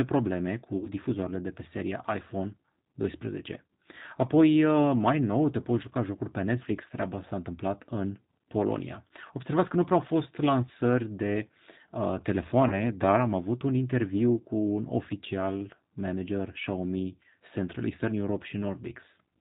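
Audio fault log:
throughout: G.729 codec. The speech passes through a low-rate coder that rebuilds it from a vocal tract filter, a pitch predictor and a few pulses per frame, which fits an 8 kbit/s G.729A stream. Nothing above 4 kHz survives, so the speech sounds plainly rough, synthetic and dull.
0.77–0.87 s and 12.68–12.86 s: VoIP packet loss concealed by the speech codec. Packets went missing, about 50 ms at the first point and 30 ms at the second. The decoder filled each gap by extending its last pitch and filter at falling gain, which stretches the sound into a fading buzzy tone or coloured noise. Each frame builds on the one before, so the speech stays weak and distorted briefly after packets resume.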